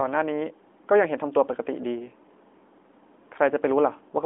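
Nothing to flag here: it's a short bit of speech that comes through a narrowband phone-style line, and there's no technical fault to point to anywhere in it.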